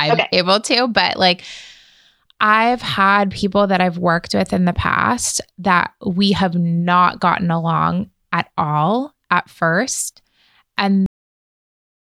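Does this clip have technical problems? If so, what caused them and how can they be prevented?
Yes, there's a cut-off end: at 11.06 s the speech stops mid-sound and drops straight to digital silence, because the final buffers never got written. Flush and close the recorder properly before stopping.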